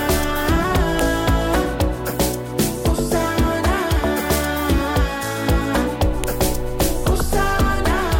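A sharp, loud click snaps through the audio at 0.99 s and again at 6.24 s, each over almost instantly and unrelated to whatever the signal is doing at that moment. This is a file header played as audio: separate WAV pieces were joined or streamed without stripping their headers, so a few dozen bytes of file metadata were read as sample values, producing a brief burst at the start of each new piece.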